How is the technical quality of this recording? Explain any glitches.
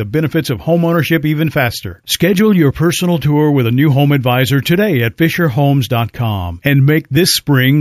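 The recording has one clear technical fault, present throughout the speech: imaging from sample-and-hold upsampling. The audio was raised to a higher rate by simply repeating each sample, with no smoothing filter to remove the mirror copies of the spectrum. The lowest copy fills the band from 8 kHz to 16 kHz, which fits an original 16 kHz rate, at about 20 dB below the speech. It sounds like a bright, metallic fizz that tracks the voice's loudness.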